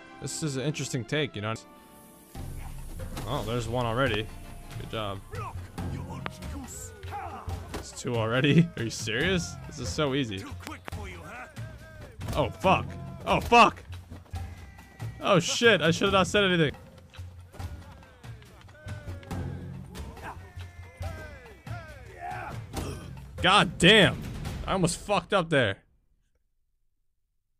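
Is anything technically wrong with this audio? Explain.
Yes. There are two kinds of fault: skipped compressed frames and loud pops.

Compressed frames skipped: at 1.56 s the audio jumps ahead by roughly 700 ms, and at 16.70 s by roughly 200 ms. Whole frames never reached the output, either missing from the file or rejected by the decoder as damaged. The jump sizes fit multiples of a roughly 93 ms frame. At each join, material is lost.

Loud pops: single pops occur at 4.14–4.16 s, about 15 dB above the signal, and at 6.26–6.28 s, about 20 dB above it. A pair of pops falls between 10.67 and 10.90 s, peaking about 15 dB above the signal. These are likely voltage pulses from a plug, switch, static discharge or driver glitch. Unlike the frame skips, they are sharp and loud, sit on top of the sound, and nothing goes missing underneath.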